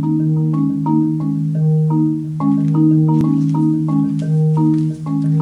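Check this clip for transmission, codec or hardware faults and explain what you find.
Nothing stood out on listening that would point to a problem in how the audio was sent, encoded or captured.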